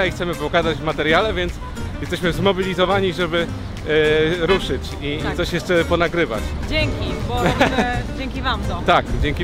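Hard clipping hits three peaks: 1.11 to 1.17 s, about 2 dB over; 7.46 to 7.80 s, about 4 dB; 8.89 to 8.98 s, about 3 dB. Flattened tops add harsh, crackly upper harmonics.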